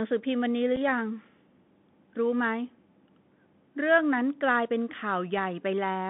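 Bluetooth CVSD headset codec, throughout: the speech travels over a narrowband link that encodes just one bit per sample, consistent with a 64 kbps CVSD stream. The band runs from 150 Hz to 3.6 kHz, the step-size tracking plainly roughens sibilants, and a granular hiss sits beneath everything.

Unconcealed Bluetooth headset packet loss at 0.76 s: a couple of voice packets went missing between headset and phone, leaving a gap of about 7.5 ms filled with nothing. It sounds like a tiny abrupt dropout, a brief hole with abrupt edges before the speech resumes.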